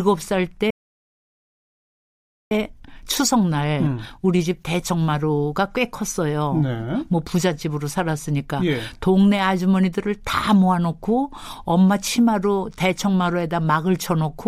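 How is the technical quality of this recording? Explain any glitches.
Two playback glitches disrupt the speech early on, one after the other.

From 0.70 to 2.51 s a playback stall cuts the sound off mid-flow into about 1.8 s of silence, most likely because the player ran dry of data or its thread was blocked.

From 2.51 to 5.51 s the speech sounds hurried at unchanged pitch. This is time-compressed catch-up: the player trims small pieces and cross-fades them, running at 1.1 times normal speed to clear the backlog.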